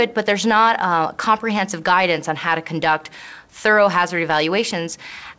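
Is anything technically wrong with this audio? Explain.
No, nothing technically wrong is audible here.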